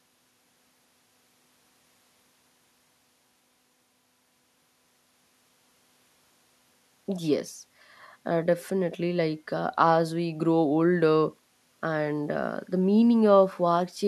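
Nothing in this speech clip stands out as a technical fault; it's a clean listen with no problems to point to.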